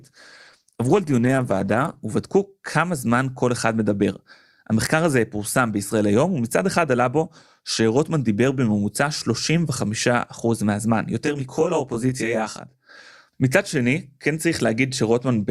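For the first 2.0 s the player is on an adaptive stream starting at a low bitrate. It begins on a cheap version of the stream to get playback going, then switches up once it has measured the connection. During those two seconds the speech has little real treble and stronger codec artefacts, which fits an Opus stream of roughly 16 kbit/s. At 2.0 s the clarity jumps without any gap, consistent with a step to about 64 kbit/s.

From 11.25 s to 12.89 s a channel delay causes comb filtering. One channel runs about 20 ms behind the other, and when the two are summed to mono, everything they share cancels at a regular series of frequencies, starting very low, in the tens of hertz, and repeating closely up the spectrum. The speech turns rough and slightly doubled over that stretch, and returns to normal at 12.89 s.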